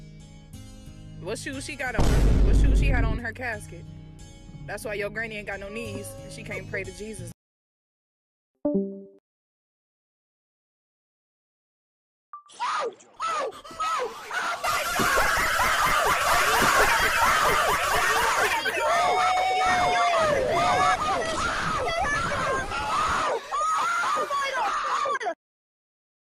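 From 16.09 to 20.95 s a second, equally loud copy of the sound runs about one and a half seconds behind, then drops out abruptly: a doubled audio track, likely the signal captured twice through a slower parallel path, with no decay or room colour.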